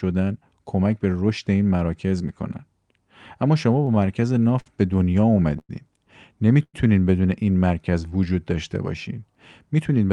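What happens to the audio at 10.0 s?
Right at the tail of the clip, from about 9.80 to 10.11 s, you get a jitter buffer speed-up. The receiver had built up more buffered audio than it wanted, so it trimmed out short chunks a pitch period or so long, again and again, shaving off roughly 50 ms in total. That pushes playback to about 112% speed with the pitch unchanged, so the last bit of speech comes across rushed.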